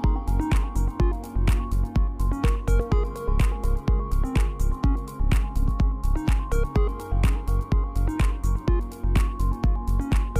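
Nothing technically wrong can be heard in this audio. No fault stands out at any point in the clip.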